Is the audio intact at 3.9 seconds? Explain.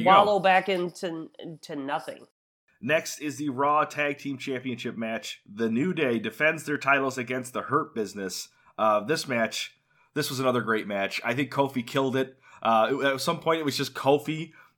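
No. At 3.9 seconds the speech carries clock slip clicks, which run from 0.13 s to 14.73 s. A single sample is dropped or repeated about every 70 ms, roughly fourteen times a second. That steady rate likely comes from two devices running on unsynchronised clocks about 400 parts per million apart. Each slip makes a faint tick. At this pace they blend into a soft rattle, clearest on loud sustained sounds.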